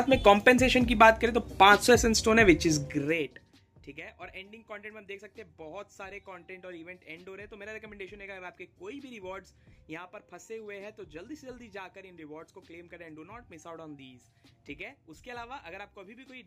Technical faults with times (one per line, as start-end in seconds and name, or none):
2.72-3.56 zipper noise